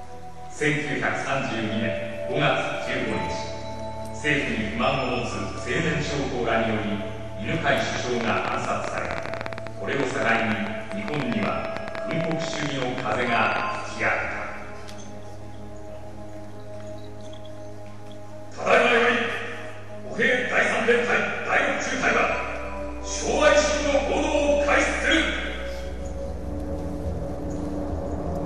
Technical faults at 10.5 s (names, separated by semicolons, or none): train of clicks